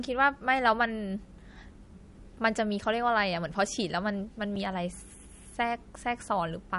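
Throughout the speech, the encoder has starved the signal of bits, most likely through MP3 compression at a low rate that fits about 48 kbps. Weak frequency lines drop in and out between frames, and nothing survives above 11.2 kHz, so the damage is plainly audible as a watery, swirling dullness with smeared consonant attacks.

At 4.56 s, the output is replaced by a block of digital silence lasting 5.33 ms, which fits a 256-sample block of zeros. Because it is well under 15 ms, it is heard as a brief tick or dip in the speech rather than as a gap.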